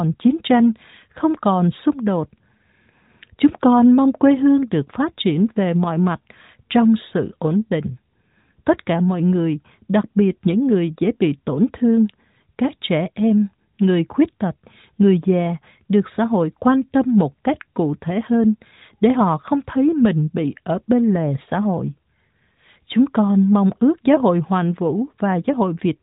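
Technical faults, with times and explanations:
No technical faults are heard in this recording.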